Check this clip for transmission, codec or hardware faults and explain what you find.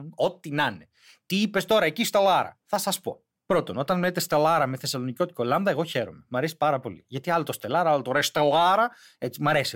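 Nothing in the speech recording points to a fault anywhere along the chain from capture to playback. There is no event at any point in it to report.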